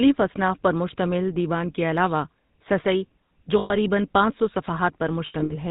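Speech with plainly audible GSM full-rate codec damage throughout. Nothing is heard above 4 kHz, and the voice carries a buzzy, gravelly roughness that fits the 13 kbps full-rate coder. The codec rebuilds the voice from a vocal-tract model driven by coarsely spaced pulses, so the excitation itself sounds grainy. Plain telephone band-limiting would only muffle the sound. Here there is a rasp layered on top.

Lost GSM frames occur at 3.58–3.75 s, between "کے علاوہ سسّی جو" and "پانچ سو". About 120 ms of sound is replaced by a held, metallic ring. A second burst at 5.26–5.52 s totals 160 ms, scattered across that span, with the longest run around 70 ms. The decoder repeats the last good frame, so each gap rings instead of cutting to silence. A simple dropout would cut to a hard, clean gap, and a stuck buffer would loop the same waveform at constant level.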